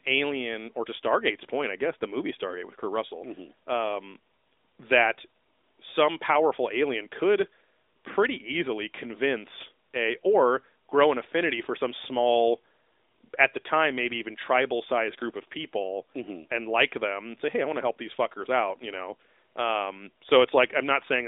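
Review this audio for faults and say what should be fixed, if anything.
Nothing needs fixing, as no faults can be heard in the speech. It has passed through an AMR narrowband mobile codec, so the band runs from about 250 Hz to 3.7 kHz with nothing above 3.8 kHz, and the light codec colouring fits the 12.2 kbps mode.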